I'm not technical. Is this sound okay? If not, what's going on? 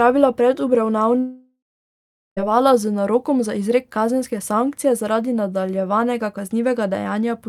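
No. From 1.19 to 2.43 seconds there is a long network dropout. The speech turns into a fading buzz, then silence, and returns at "z narokom za izrek" with part missing, likely from lost internet data.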